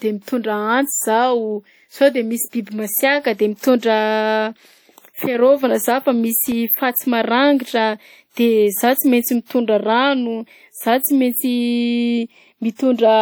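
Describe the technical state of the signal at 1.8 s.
At 1.8 s the speech carries plainly audible WMA compression, likely the cause, present throughout. The transform codec, at a rate that fits about 48 kbps, spreads quantisation noise across the signal, giving a ringing, washy quality. A spectrogram would show smeared energy around onsets and an upper limit near 20.1 kHz.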